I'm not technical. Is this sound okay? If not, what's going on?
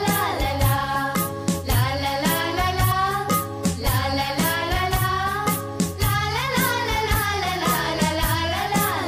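No. At 2.90 s, compressed frames are skipped: about a twentieth of a second of sound goes missing. The sound jumps ahead at that point.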